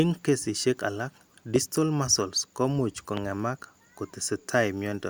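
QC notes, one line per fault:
1.56–1.58 s and 3.17–3.20 s, loud pop: a brief voltage pulse, likely from a plug, switch or static discharge, gets added, giving a single sharp pop about 15 dB above the speech, which continues underneath.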